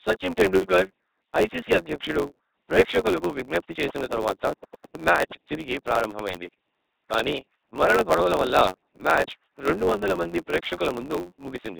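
LPC-10 vocoder damage runs from start to finish. The speech has been reduced to a short all-pole filter excited by either a buzzy pulse train or noise, so each instant is forced to be fully voiced or fully unvoiced. The result is a heavily degraded, mechanical robot voice, which fits a 2.4 kbit/s LPC-10 stream. Hiss and buzz swap in where the voicing choice goes wrong.

A block size mismatch (truncated) is also present throughout. One stage hands over longer blocks than the next stage takes in, and the tail of each block is dropped. The regular cuts produce a steady buzz at 91.9 Hz, which fits 512-sample blocks being written and then shortened. The missing pieces make everything run 1.07 times fast, while the timbre stays the same.

A train of clicks runs from 3.89 to 4.96 s. It begins right after "ఐసీసీ అధ్యక్షుడు ప్రేక్షకులకు విజ్ఞప్తి" and stops before "మ్యాచ్ తిరిగి ప్రారంభమైంది". There are about ten similar pops, regularly spaced at 8.82 per second, and they peak around 10 dB above the speech. 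The ticking sits on top of the sound. It is likely caused by interference from nearby equipment or a faulty connection or power supply.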